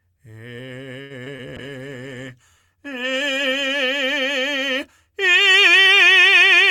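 From 1.01 to 1.12 s the music holds a short stall from a late packet: the jitter buffer ran dry and the receiver stretched the last sound for about 87 ms, then resumed from the same point. Nothing is lost, but playback ends up that much later. A spectrogram shows the partials frozen flat across that span.

At 1.24 to 1.28 s and again at 1.36 to 1.40 s come two short concealed packet losses. About 20 ms of audio each time never arrived, and the decoder extrapolated the preceding sound before crossfading back. They are heard as brief smears or wobbles, and the waveform shows a slightly smoothed, repetitive patch at each point.

From 1.57 to 3.78 s a call bitrate drop coarsens the coding, which fits a fall from about 64 to 27 kbps. The audio bandwidth shrinks from 20 kHz to 12 kHz, so the top sheen disappears. On a spectrogram everything above 12 kHz goes dark until the rate recovers.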